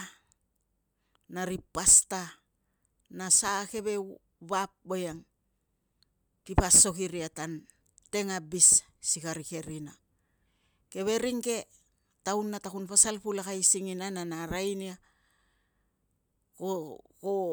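Nothing in the recording stands out as a technical fault, so there's nothing here to walk through moment by moment.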